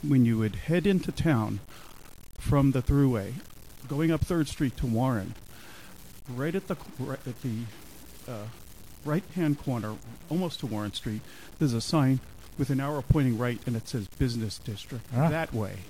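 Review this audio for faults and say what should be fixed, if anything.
Grainy, signal-following distortion runs through the whole clip, the signature of low bit depth without dither. The error sits only about 25 dB below the signal and changes character with the material, so quiet passages turn gritty and the softest moments sputter between steps or drop out. The likely cause is a reduction to roughly 7 bits by plain truncation, leaving the quantisation error correlated with the audio. Fix it by keeping 16 or 24 bits throughout and applying dither at any final word-length reduction.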